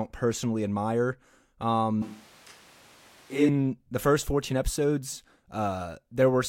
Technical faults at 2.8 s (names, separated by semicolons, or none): switch to a distant microphone